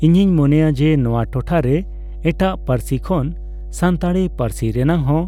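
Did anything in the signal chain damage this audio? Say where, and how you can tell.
Yes, in the analogue wiring ahead of the converter. Mains hum runs under the speech for the whole clip as a steady 50 Hz tone, sitting only about 15 dB below the speech, so it fills every pause. A ground loop or a nearby transformer has coupled the power line into the signal. Unlike wind or handling rumble, which wanders in level and pitch, this tone holds its pitch and level throughout and does not change with the speech.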